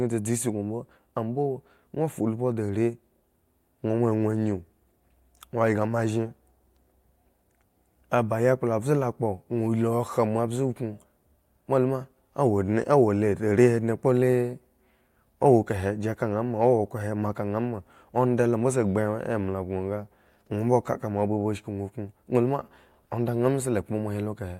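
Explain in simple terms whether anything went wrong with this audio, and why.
Listening to this speech recording, nothing stood out as having gone wrong with the audio.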